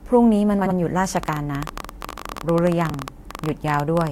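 At 0.61 to 0.72 s, frames out of order: two neighbouring chunks of about 46 ms swap places, giving a garbled flutter. From 1.17 s to 4.08 s a train of clicks runs at an uneven 17.6 per second, around fifty ticks peaking about 15 dB above the speech, likely from equipment interference. Under that, at 2.90 to 2.94 s, frames out of order again, with swapped blocks of about 29 ms, which fits runs of three frames, giving another brief stutter.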